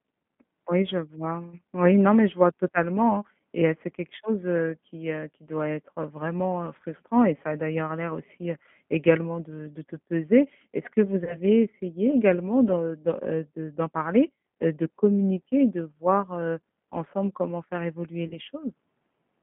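G.729 codec damage runs through this whole speech recording: the sound is confined to roughly 150 Hz to 3.4 kHz and rebuilt from a coarse filter and pulse model, giving a plainly rough, synthetic edge that fits an 8 kbit/s G.729A stream. VoIP packet loss concealed by the speech codec appears at 11.24–11.38 s and again at 18.28–18.37 s. Each time, about 30 ms of audio goes missing, which fits a single lost packet. The decoder fills the gap by extending its last pitch and filter, which produces a brief buzzy or noisy smear that fades, and the voice stays weak or distorted for tens of milliseconds or more until the decoder recovers.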